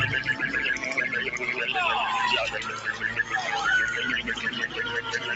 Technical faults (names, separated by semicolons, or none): sound cut by the noise suppressor